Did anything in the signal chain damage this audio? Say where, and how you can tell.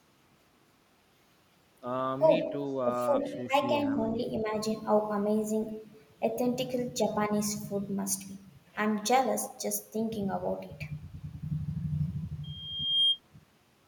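Yes. Faint delayed copies of the speech surface at 2.42–2.48 s, 2.69–2.73 s and 3.22–3.46 s, each trailing by 337 ms and sitting about 30 to 40 dB down. This is echo leak, likely from a far-end echo canceller in the call processing letting residual loudspeaker pickup back into the return path.

Between 2.76 and 3.15 s, again at 3.47–3.54 s and at 4.42–4.55 s, the speech briefly ducks by up to about 10 dB in short bites. This is speech suppressed in double talk, likely the call processing's echo suppressor clamping down while both ends were active.

From 12.43 to 13.20 s a steady 3.2 kHz tone swells over roughly half a second until it sits about 5 dB above the signal. That is a loudspeaker feedback squeal: at playback the microphone re-captured its own loudspeaker, and loop gain above one at that frequency let the tone run away.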